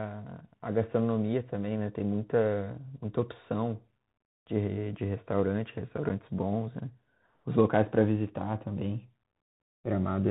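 Throughout, the speech carries a Bluetooth CVSD headset codec signature, which fits a 64 kbps CVSD link. Each sample is coded as a single up-or-down bit with an adapting step, so everything above 4 kHz is gone, sibilants turn scratchy, and a granular hiss sits plainly under the speech.

At 6.09 s there is unconcealed Bluetooth headset packet loss. A gap of about 7.5 ms, roughly one packet, was filled with silence or an idle pattern instead of being masked. It is heard as a brief, hard-edged dropout, and the speech resumes momentarily quieter as the CVSD step size recovers.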